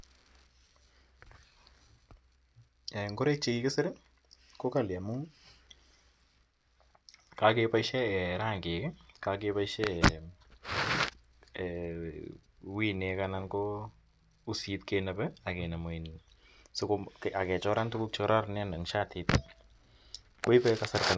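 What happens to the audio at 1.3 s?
Nothing goes wrong at 1.3 s; the speech there carries on cleanly, with no dropout, click, glitch or other fault.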